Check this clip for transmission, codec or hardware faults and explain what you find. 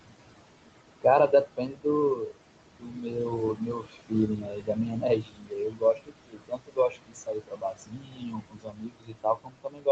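The trouble here is an aggressive noise suppressor, which both leaves processing artefacts behind and eats into the speech itself. Nothing points to a codec or hardware fault.

Noise suppressor artifacts run through the whole clip. The room noise sits only about 11 dB under the speech, and the suppressor pulls it down by about 21 dB band by band. So the background pumps, dropping away in gaps and surging back under speech.

Speech cut by the noise suppressor shows up at 1.28 to 1.86 s, 2.56 to 3.32 s, 3.55 to 5.05 s, and from 5.22 s right through to the end. The suppressor mistakes quieter speech for noise and ducks it by about 19 to 22 dB. Roughly a third of a second, then nearly half a second, then about a second gets hit in the first three stretches, and the last runs on to the end. Soft consonants and word tails sound swallowed. The call-style band limit with nothing above 8 kHz is just normal microphone processing.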